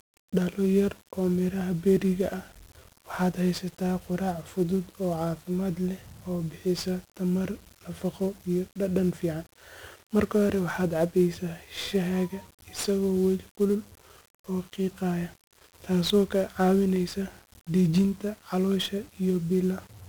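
From start to finish, the speech carries heavy 1-bit DFPWM compression damage. Each sample is reduced to a single up-or-down step driving an adaptive level, so the signal only ever approximates itself, and the error shows up as dense broadband noise, consistent with roughly 48 kbps. It sounds fuzzy and crackly, with the treble sunk in hiss. A spectrogram shows a raised noise floor smeared across all frequencies, and the waveform looks jagged and stair-stepped.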